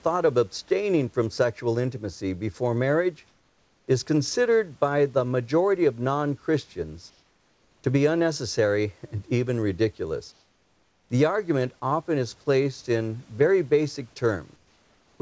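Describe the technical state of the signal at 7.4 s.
Comfort noise in place of the background covers 7.10 to 7.84 s, about 0.74 s. The real room noise gives way to a steady, featureless hiss about 3 dB quieter, likely because the sender paused transmission during silence and the receiver synthesised filler noise.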